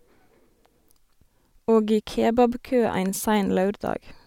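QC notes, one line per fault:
No faults found in this speech.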